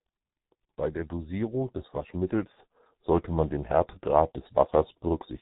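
It's a speech clip run through the G.723.1 codec for its whole length, and it's heavily mangled: nothing above about 3.8 kHz survives, so it's muffled, and the slow-updating voice model leaves it hoarse with smeared consonants, which fits the codec's roughly 6.3 kbit/s mode.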